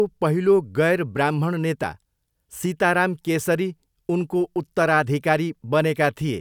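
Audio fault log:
No fault can be heard anywhere in the speech. Nothing in the recording calls for an entry in this log.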